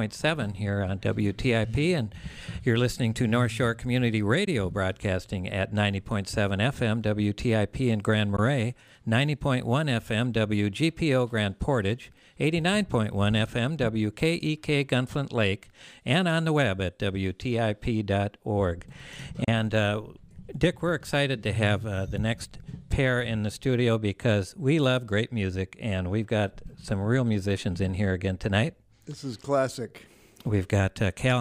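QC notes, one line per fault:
4.45–4.48 s, 8.36–8.39 s and 19.44–19.48 s, Bluetooth dropout: brief holes with abrupt or briefly faded edges, the last one longer, after which the sound resumes as if it had kept playing. This is likely a wireless link losing audio packets, consistent with one packet lost at each of the first two holes and two at the third.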